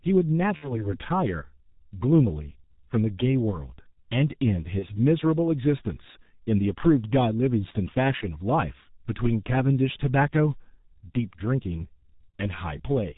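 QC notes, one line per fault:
Throughout: G.723.1 codec. The speech is muffled and hoarse, with nothing above 4 kHz. Consonants blur because the 30 ms frames update the voice model slowly. The heavy damage fits a low bitrate near 6 kbit/s.
0.56–0.92 s, 4.79–4.87 s, 12.29–12.33 s: VoIP packet loss concealed by the speech codec. Packets dropped, and the decoder repeated its last pitch and filter at falling gain. This gives a brief buzzy or noisy, fading smear. The first gap sounds like about 60 ms of lost audio, the others like about 30 ms each. The voice stays weak briefly afterwards.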